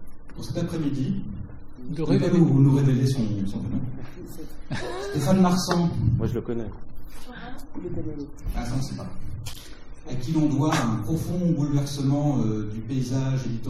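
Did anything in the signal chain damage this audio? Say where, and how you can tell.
Yes. At the network stage, the adaptive stream switched to a lower bitrate from 3.09 s to 11.09 s, an eight-second stretch, then stepped back up. The change is abrupt in both directions with no gap. During it nothing sits above 15.8 kHz and coding artefacts rise. That fits the player dropping from an AAC stream around 96 kbit/s to one near 32 kbit/s while the connection slowed.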